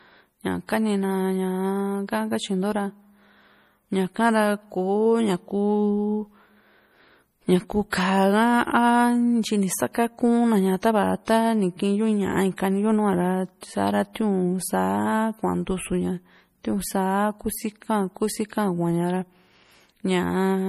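All the way through, the speech sounds watery and swirly, with nothing above 15.2 kHz, likely MP3 compression squeezed to something like 40 kbps. Weak detail flickers in and out. At 12.56 s and again at 13.61 s there's pre-echo: a short hiss smeared about 17 ms ahead of a sharp attack, because the codec spread its noise across the quiet start of the block.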